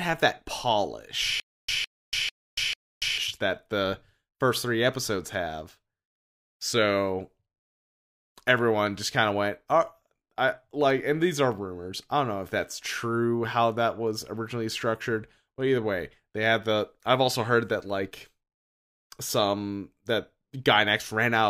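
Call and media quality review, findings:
Stutter with silent gaps, 1.40–3.18 s, ending just before "that the first three". A 159 ms speech fragment repeats 4 times, each followed by about 286 ms of digital silence, on an even 445 ms cycle. Likely a player/stream stall: each retry replays the last buffered fragment, then runs empty. The audio that should have played during those gaps is lost.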